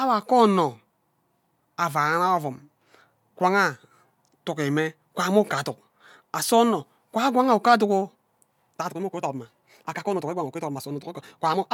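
From 8.68 s to the end, the speech suddenly runs 1.53 times faster while its pitch holds, sounding rushed. This time-stretched section was likely squeezed by software dropping short pieces. A spectrogram shows crowded syllables with harmonics at unchanged heights.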